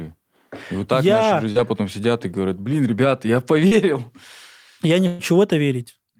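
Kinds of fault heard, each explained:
Short concealed packet loss: about 40 ms of speech arrived too late at 1.51 s and 3.67 s, and the decoder bridged each hole by extending the preceding sound before rejoining the real signal. On a spectrogram, harmonics briefly smear flat; the waveform shows a slight repetitive stretch.
Burst of packet loss: at 5.07 s roughly 120 ms of consecutive audio was lost, filled by continuing the last sound while fading it, then speech resumes further on. A spectrogram shows a held, decaying band with no gap; the waveform tapers before an abrupt restart.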